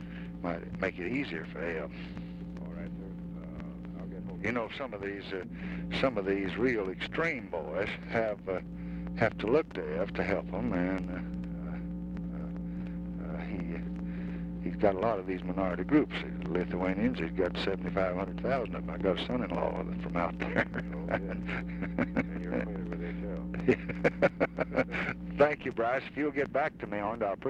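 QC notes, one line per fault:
No faults heard; nothing to log.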